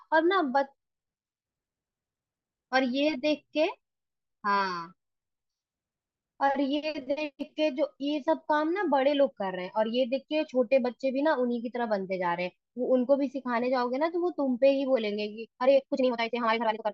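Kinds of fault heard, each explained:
Time-stretched section: from about 15.4 s right to the end, the speech suddenly runs at roughly 1.9 times its earlier pace while the pitch stays put, so it comes across rushed rather than chipmunky. That's most likely software squeezing the tail end to fit a set length, keeping pitch by cutting out short slices of the audio.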